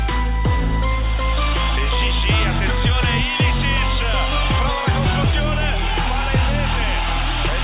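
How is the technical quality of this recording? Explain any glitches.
Nothing stood out on listening, and there are no glitches to explain in this recording.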